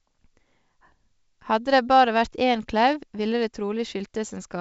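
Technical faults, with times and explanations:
Nothing here calls for a fault line, since the speech simply comes through G.722 wideband telephone coding at 64 kbit/s, with the usual band-limit leaving nothing above about 7.7 kHz.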